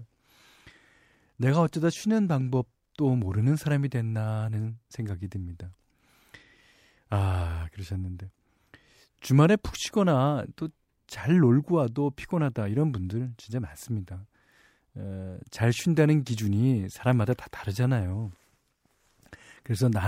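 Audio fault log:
No faults are logged for this speech clip.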